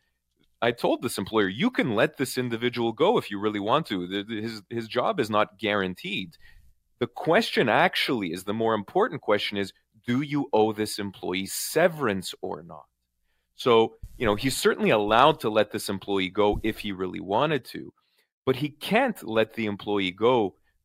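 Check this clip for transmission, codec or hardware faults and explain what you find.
One fault: a block of digital silence at 16.07 s. About 3.5 ms of the speech drops straight out, likely because the output buffer was not filled in time. At this length it is heard as a tick or dip rather than as silence. A waveform shows a flat gap, and a spectrogram shows a thin vertical broadband stripe.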